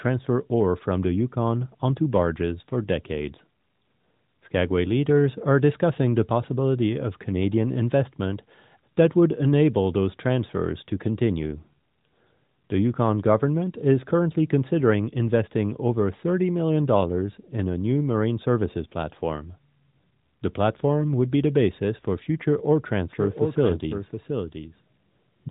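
Speech clip, carried over a narrowband mobile path with nothing above 3.8 kHz, consistent with AMR-NB at 12.2 kbps. From 23.12 s, right after "basis for future ore", a doubled audio track starts abruptly and runs to the end. A dry second copy trails about 0.7 s behind, roughly 5 dB quieter, likely from a second, slower capture path.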